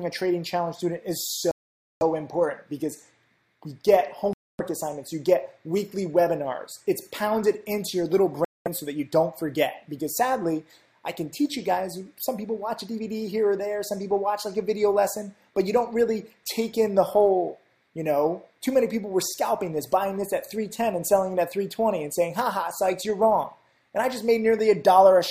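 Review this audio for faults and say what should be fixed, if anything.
Likely Bluetooth stalls, with interference starving the headphone buffer, drop the sound to silence at 1.51–2.03 s, 4.33–4.60 s and 8.45–8.68 s before playback resumes. Reducing nearby 2.4 GHz interference, keeping the source close to the headphones, or recording from a wired path would prevent these dropouts.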